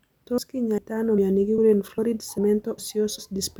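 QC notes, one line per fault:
0.38, 0.78, 1.18, 1.58, 1.98, 2.38, 2.78 and 3.18 s: audio missing between chunks. The capture or processing likely runs in 0.5 s chunks and drops about a tenth of a second at each handover, then butts the remaining pieces together with no silence. The result is a skip every 0.4 s, each an abrupt jump in the speech that can clip part of a syllable.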